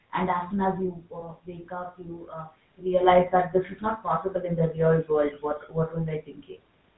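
Speech recorded with audible room noise, carried through the GSM full-rate codec for its whole length. The voice has the buzzy, gravelly roughness of this codec's pulse-driven vocal-tract model, and the band ends at 4 kHz, a sound consistent with 13 kbps full-rate GSM. From 1.20 to 1.24 s there is a lost GSM frame: the decoder held the last good frame's settings, giving a brief rough, metallic ring, which fits a single missing 20 ms frame. The level changes around half a second and again near three seconds sound like the talker shifting relative to the microphone.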